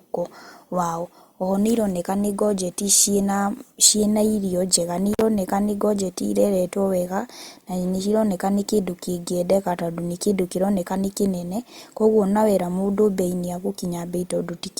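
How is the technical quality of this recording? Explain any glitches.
The recording has one clear glitch, in the speech just after the five-second mark.

From 5.13 to 5.21 s there is a brief crackle, a dropout of about 45 ms during which the audio falls away to faint hiss, and then a second crackle as the sound returns. This is an intermittent contact. A loose cable or plug momentarily lost its connection, so the signal path opened and then closed again. The crackles are the contact breaking and remaking, and the hiss is what remains while the line is open.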